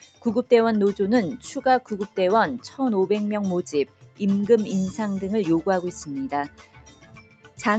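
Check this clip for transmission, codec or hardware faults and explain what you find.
The faults come from processing, not transmission or hardware: a speech noise suppressor is acting on non-speech material. The call path (Opus, with nothing above 8 kHz) can be heard working as expected.

Noise suppressor applied to music or sounds, throughout: a suppressor tuned for voices treats sustained tones, ambience and decays as noise and pulls them down by around 10 dB. Onsets pass while held portions sink, so the level pumps and thins.

Sound cut by the noise suppressor, at 0.03–0.25 s, 3.86–4.21 s and 6.48–7.59 s: the suppressor judged these stretches noise-like and attenuated them by about 10 dB, then about 12 dB twice. Sustained and decaying parts sink, with tails cut short.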